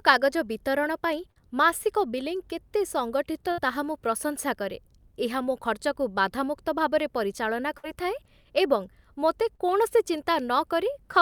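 A speech recording with two kinds of network fault. Short concealed packet loss occurs at 1.31 to 1.38 s, between "ବିତରଣ ପାଇଁ" and "ମାସିକ ବିଲିଂ କେତେ ସଙ୍ଗଠିତ", and at 9.55 to 9.61 s, right after "ଏବଂ ମୋତେ". Each time about 40 ms of audio failed to arrive in time, and the receiver covered the hole by extending the preceding sound for about 42 ms and 32 ms respectively before blending back. This is heard as a brief smear or wobble. On a spectrogram it shows as a thin vertical band where harmonics run unnaturally flat or turn into smooth noise. The waveform shows a short, overly regular stretch. A burst of packet loss appears at 3.52 to 3.60 s and at 7.78 to 7.85 s, just after "ଖର୍ଚ୍ଚକୁ ବାଧାମୁକ୍ତ ଭାବରେ ପରିଚାଳନା". Each time about 60 ms went missing in a run. The decoder prolonged the last sound as a held buzz or hiss, lowering it across roughly 56 to 61 ms, and the speech then resumed further on with that part lost. 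In a spectrogram this looks like a frozen, fading smear ending in a hard join. In the waveform the envelope decays and then jumps back.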